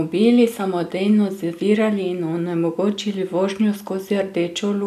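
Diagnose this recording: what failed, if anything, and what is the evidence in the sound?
Nothing failed anywhere in this speech recording.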